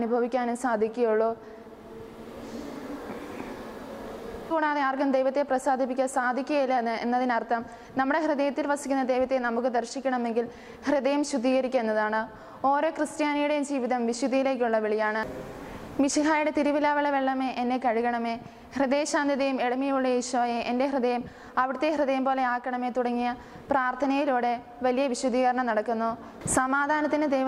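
At 4.50 s the audio has a skip ahead. Playback jumps forward with no filler, and roughly 0.7 s of sound is missing. The two sides are joined almost directly. A burst of waiting audio was dropped, cutting the delay in one step.

From 4.60 to 7.77 s there is a jitter buffer speed-up. The buffer still held more audio than it wanted. It trimmed short pitch-period pieces repeatedly, about a fifth of a second in total. The sound runs about 6% fast at unchanged pitch, slightly hurried.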